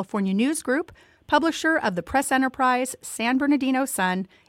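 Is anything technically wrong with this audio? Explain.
No, nothing is technically wrong with this audio.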